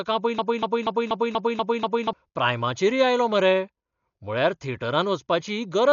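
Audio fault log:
throughout: Dolby Digital compression. The speech sounds dull and boxed-in, with nothing above 7 kHz, and a rough, fluttering grain hangs around the voiced sounds. The damage is heavy, which fits a low bitrate of around 48 kbps. The likely cause is an AC-3 style encoder starved of bits: it trims the top of the band and leaves many frequency lines without real detail, so the decoder fills them with noise that shimmers against the tones.
0.39–2.13 s: broken-record loop. A fragment of about 0.24 s plays seven times back to back, stuttering mechanically for nearly two seconds before normal speech resumes with "प्रायमाचेरय आयलो मरे". Each repeat is identical, and whatever should have been heard in that stretch is gone. This likely comes from a player, encoder or stream that stalled and kept resending the last piece of audio it held until fresh data arrived.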